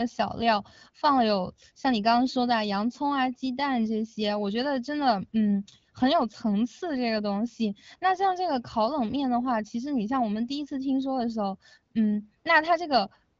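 Nothing stood out on listening to this speech clip, which carries the band-limited sound of AMR wideband (HD Voice) coding at 12.65 kbit/s with no content above about 7.1 kHz.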